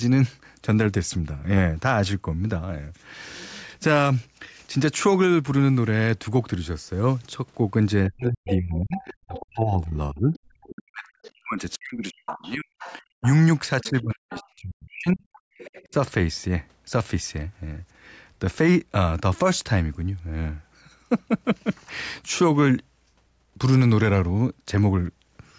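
From 8.08 to 13.23 s the speech dips and breaks apart for about four seconds in all, falling by as much as roughly 40 dB. It dips again from 13.82 to 15.23 s, for about a second, and briefly at 15.87 to 15.94 s, by roughly 30 dB. This is likely speech suppressed in double talk: with both sides talking at once, the echo canceller turned the local talker down along with the loudspeaker echo.

A second, fainter voice comes through underneath at 8.46 to 9.4 s (about 10 dB below the speech), 10.34 to 11.31 s (about 25 dB below), 12.26 to 14.46 s (about 15 dB below) and 15.33 to 15.85 s (about 25 dB below). This is likely the other side's voice leaking through, where the loudspeaker playback wasn't fully cancelled from the microphone.

At 15.51 to 15.58 s the room sound drops out for about 70 ms, by about 36 dB, then returns. This is background gated by the echo canceller, which clamped the microphone hard while the loudspeaker played.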